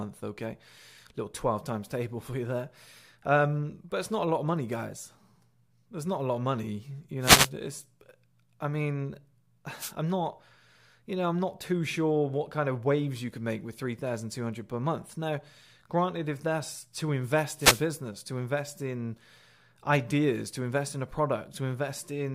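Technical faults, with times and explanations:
7.20–7.50 s, 9.77–9.93 s and 17.54–17.86 s, wireless microphone noise hits: the analogue FM radio link faded as reflected signals cancelled at the receiver, so receiver noise rose over the speech. Each dropout sounds like a brief swish or burst of static, lasting a fraction of a second.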